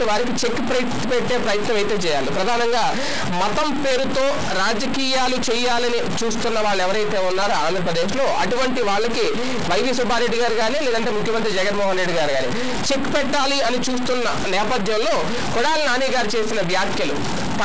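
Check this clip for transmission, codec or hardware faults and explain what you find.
One hardware fault runs through the whole clip: a stuck bit, heard over audio that has passed through a G.722 call path with nothing above 8 kHz. Throughout, distortion rides on the sound, and the pauses fill with hiss instead of falling silent. The likely cause is one data bit stuck at 0 or 1 in a broken line or converter, shifting roughly half the samples by that bit's weight. Clipping distorts only the peaks; this noise persists even in quiet passages.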